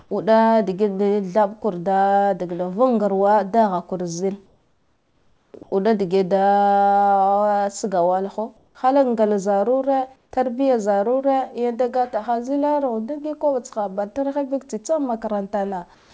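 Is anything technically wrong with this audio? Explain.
Yes. Comfort noise replaces the background in the pauses at 0–0.11 s, 4.46–5.54 s, 5.63–5.72 s, 8.57–8.75 s (just before "hala ngla"), 10.16–10.31 s and 15.95–16.10 s. This is likely discontinuous transmission: the sender goes quiet once no speech is detected, and the receiver substitutes generated noise. That fill is steady and featureless and mostly about 2 to 3 dB quieter than the real room sound, about 1 dB louder at 8.6 s. A noise gate would drop these pauses to near silence, but here the hiss continues without its natural detail. The audio, which contains nothing above 8 kHz, came through what sounds like a G.722 call path.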